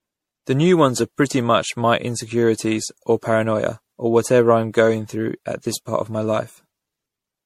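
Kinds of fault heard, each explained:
Generation loss: The speech sounds swirly, smeared and hollow throughout, worse than a single encode would leave it. Consonant attacks are blurred. Nothing is heard above 16.5 kHz. The character fits MP3 at 64 kbit/s. The likely cause is repeated decoding and re-encoding, around ten passes. Each pass quantises again on a shifted frame grid. Its noise and spectral holes stack on top of the earlier ones, so the damage builds up.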